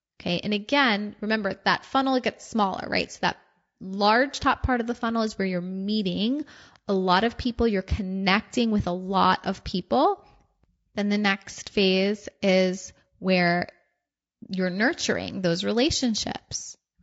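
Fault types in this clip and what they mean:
Low-delay AAC compression: The speech was likely passed through a low-delay AAC codec of the kind used for video calls, and the damage fits a bitrate around 32 kbps. Its very short frames cannot separate the voice's pitch harmonics cleanly and leave few bits to spare, so the voice comes out plainly rough and grainy, with a noisy haze filling the gaps between harmonics and a dulled, somewhat synthetic upper band throughout.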